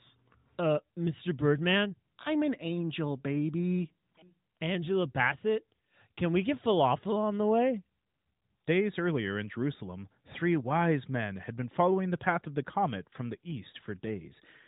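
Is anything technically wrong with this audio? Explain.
No, nothing's technically wrong here: it's just speech coming through an ordinary narrowband mobile codec that's doing exactly what it's built to do.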